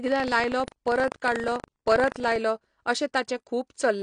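Buffer tearing runs from 0.0 to 2.38 s in this speech clip: writer and reader have slipped, so each 40 ms period carries a small slice of audio from about 70 ms earlier between hard joins, giving a 25 Hz buzz. AAC compression runs throughout, with plainly audible codec damage and nothing above 9.8 kHz, likely from AAC-LC at a low bitrate around 32 kbps.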